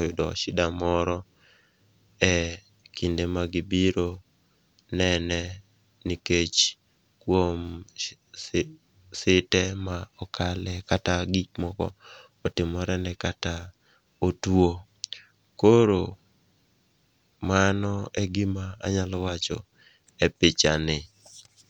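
No audible technical faults turn up anywhere in this speech recording.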